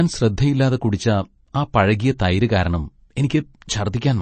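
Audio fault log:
throughout MP3 compression: The sound points to a lossy encoder likely starved of bits, at a rate that fits about 32 kbps. It has cut everything above 8.3 kHz, so the speech sounds dull and muffled at the top. Weak frequency lines are dropped and return from frame to frame, leaving a plainly audible watery, swirling texture, metallic chirps on s sounds, and attacks that smear.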